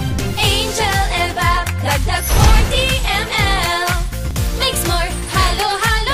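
At 4.31 s the audio has a brief skip where a short stretch of sound, about 16 ms, is missing and the waveform jumps straight from one point to a later one. This is an overlap between stream segments: the time stamps of adjacent segments, which run about 6.0 s long here, claim the same span twice, and the player trims that span away even though the sound there was not actually duplicated.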